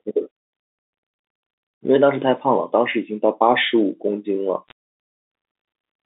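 From 4.68 to 4.72 s a short cluster of sharp ticks crackles over the speech, which continues unchanged underneath. These are bit errors on a digital phone line: on the G.711 link, roughly two bits in a thousand flipped, each corrupting one sample and jolting the waveform.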